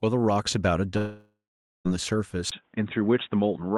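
From 0.97 to 1.87 s the speech drops out for about 0.88 s, likely a long network dropout: a fading buzzy continuation, then roughly half a second of silence before the audio resumes. At 2.50 s, after a 20 ms gap, the sound turns dull with nothing above 3.8 kHz and a faint new noise floor at unchanged level, likely the input switched to a poorer device.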